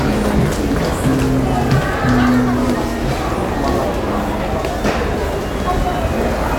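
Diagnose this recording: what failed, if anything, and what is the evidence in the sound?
Nothing failed; no stage shows any fault in this recording.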